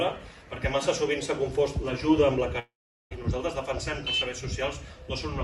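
From 2.59 to 3.13 s the sound turns into a fading buzz, then silence, and resumes further on: likely a long network dropout, about half a second lost.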